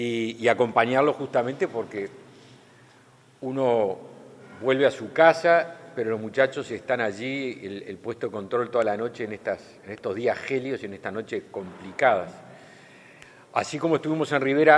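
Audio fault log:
No fault is heard in this audio.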